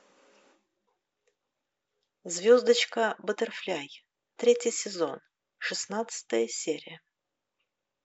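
Nothing technical goes wrong anywhere in this bit of speech, so there's nothing here to flag.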